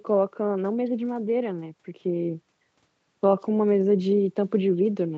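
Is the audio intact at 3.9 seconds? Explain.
Yes, the audio is intact at 3.9 seconds, with no fault at that moment.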